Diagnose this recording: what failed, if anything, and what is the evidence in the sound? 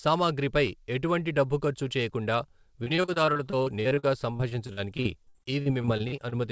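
From 2.84 s to 6.33 s, after "ఎటువంటి డబ్బు ఖర్చు చేయకుండా", the speech turns choppy and robotic, with dozens of dropouts up to 58 ms. This is repeated packet loss on the network: each hole in the G.722 call stream is patched by extending the last sound, covering about 22% of the span.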